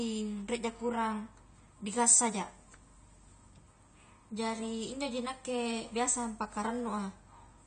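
From the first moment to the end, the speech has that dull, smeared quality of heavy AAC compression, likely AAC-LC squeezed to something like 32 kbps. Nothing survives above 9 kHz, so the top end is simply gone, and the encoder's coarse quantisation leaves gaps in the spectrum or fills bands with substitute noise. You hear it most on sibilants and held vowels, which get a fizzy, warbling edge. It's plainly audible the whole way through.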